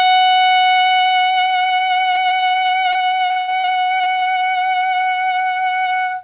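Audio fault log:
2.12–4.24 s, repeated packet loss (robotic sound). The music breaks into many short holes in quick succession, the longest 80 ms. Each hole is bridged by prolonging the sound just before it, so about a fifth of the stretch is patched. It turns choppy.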